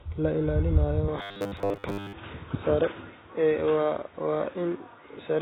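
Speech runs through the whole clip with AAC compression damage: the sound is dull and smeared, with a warbling, fizzy texture on sustained sounds and sibilants, which fits AAC-LC at a very low bitrate, likely near 16 kbps, discarding high bands to save data. At 1.08 s, just after "la ilaalinayo", the input likely switched to a poorer device. From there to the end the band narrows and a new noise floor appears about 35 dB below the signal, with no gap at the switch and little change in level. From 1.19 to 2.14 s there is robotic sound from repeated short buffers: a rigid, metallic 100 Hz buzz replaces most of the real audio while loosely following its shape. This likely comes from audio arriving too seldom, so the last 10 ms is looped to fill the time.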